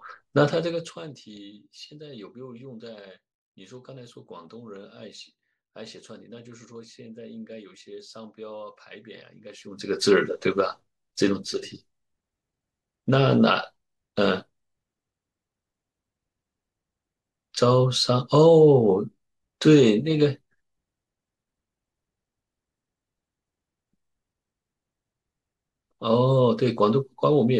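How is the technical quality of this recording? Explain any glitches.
No glitches or technical faults can be heard here.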